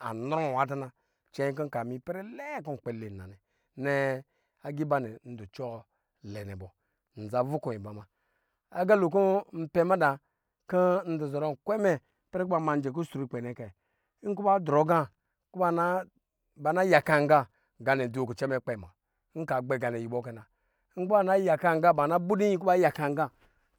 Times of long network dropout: none

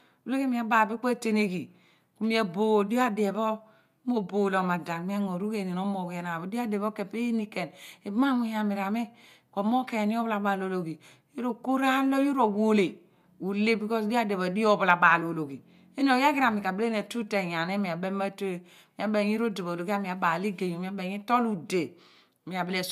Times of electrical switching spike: none

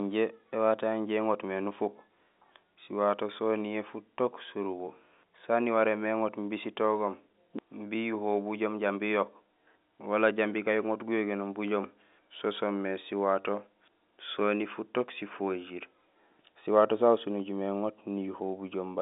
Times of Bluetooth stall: none

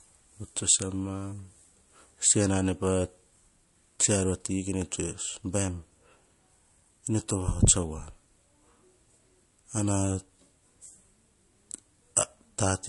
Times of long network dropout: none

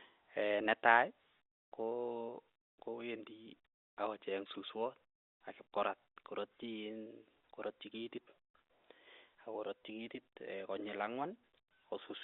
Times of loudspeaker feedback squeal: none

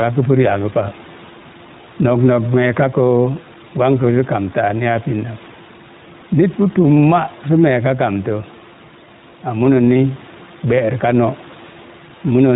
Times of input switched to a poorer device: none

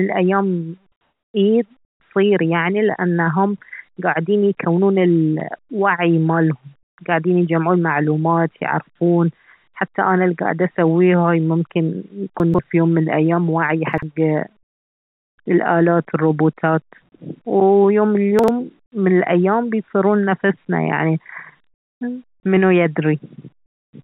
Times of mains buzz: none

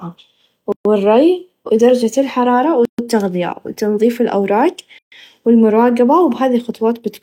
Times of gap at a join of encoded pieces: 0.72-0.85, 2.85-2.99, 4.99-5.12

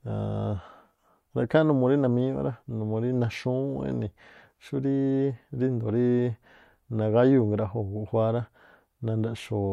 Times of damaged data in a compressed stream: none

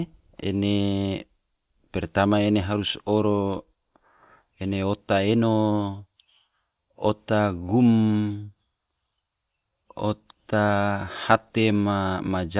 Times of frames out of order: none

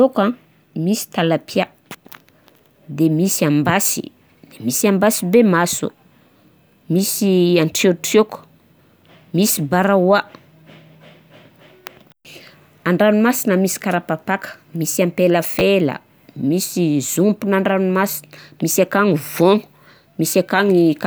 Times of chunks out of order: 15.59

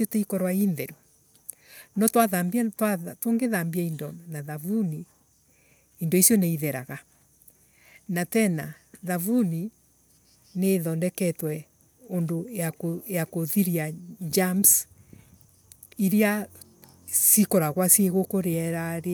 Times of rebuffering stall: none

